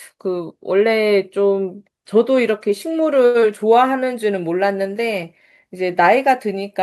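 At 3.25 s the speech hangs on one sound for a moment, a held stretch lasting until 3.37 s before carrying on from exactly where it left off. This is a short stall from a late packet. A packet missed its slot, the jitter buffer ran dry, and the receiver extended the last sound by 91 ms while it waited. Nothing was lost, but the delay grew by those 91 ms.

Right after, from 3.40 to 3.45 s, there is a brief smear where a bit of the speech seems to slip past, a quick wobble rather than a clean transition. This is short concealed packet loss. About 60 ms of audio never reached the decoder in time, and the receiver bridged the gap with only 17 ms of synthetic continuation of the preceding sound before blending back in. That drops some real content and trims the delay by roughly 40 ms.

From 3.68 to 4.05 s the speech slows to 89% of its normal rate while keeping the same pitch, with sounds drawn out. 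This is a jitter buffer slow-down. With its reserve running low or its target delay just raised, the receiver rebuilt it by repeating individual pitch periods and slivers of pause in succession, adding 48 ms over that span.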